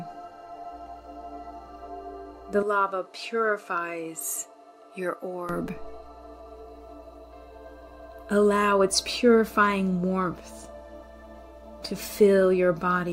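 From 2.63 s to 5.49 s the sound abruptly narrows, losing everything above 13 kHz, drops roughly 10 dB in level, and picks up a different faint background noise well below the signal. It switches back just as cleanly at 5.49 s, with no gap at either edge. The likely cause is the input switched to a poorer device. A simple filter or gain dip would not bring its own noise floor and tone as this does.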